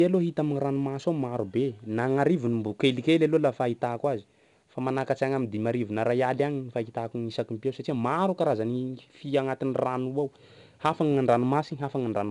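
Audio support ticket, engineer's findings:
4-bit ADPCM compression across the whole clip, 0 s to end. Each speech sample is coded as a coarse 4-bit step from a predicted value, with the step size adapting as it goes. The error rides on the signal level: plainly audible gritty hiss on louder syllables, roughness on sharp onsets where the step lags. Band stops at 8.5 kHz, dulling sibilants. Fits a stream around 89 kbps.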